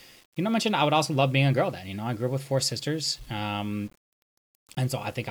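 From start to finish the speech was likely reduced to a low bit depth without dither, consistent with 8-bit samples rounded to the nearest step rather than smoothed with added noise. Because the rounding error tracks the signal, it becomes a grainy distortion that clings to the speech, most audible on quieter stretches and decaying sounds, where the level falls toward a single step. The resulting error sits roughly 30 dB below the signal throughout the clip.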